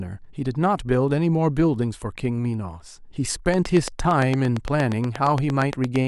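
A train of clicks runs from 3.54 to 5.97 s: around twenty near-identical pulses, evenly spaced at 8.68 per second and sitting well above the speech, heard as a steady ticking through the pauses too, likely interference from nearby equipment or a faulty connection or power supply.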